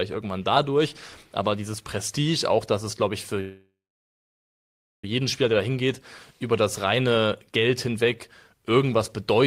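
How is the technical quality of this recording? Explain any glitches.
Two glitches stand out, both typical of audio sent over a network call.

From 3.40 to 5.04 s there's a call audio freeze. The speech hangs on a fading buzz or hiss, then about 1.3 s of silence, likely because packets stalled and the jitter buffer emptied. It picks up right where it stopped, so about 1.63 s of gap is added and nothing is lost.

Then from 6.99 to 8.70 s there's a jitter buffer speed-up. The receiver trimmed tiny pitch-period slices, roughly 0.15 s in total, to shed the extra delay. The speech runs at about 108% speed, at the same pitch, and sounds a bit rushed.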